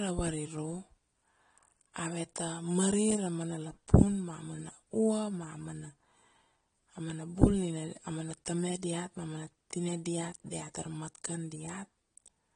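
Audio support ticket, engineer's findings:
Dull, smeared speech throughout, nothing above 9.8 kHz, warbling fizz on sibilants. Likely AAC compression: AAC-LC quantising spectral lines coarsely, consistent with a 32 kbps stream. Unlike a plain low-pass, the sound below the cut-off is also damaged.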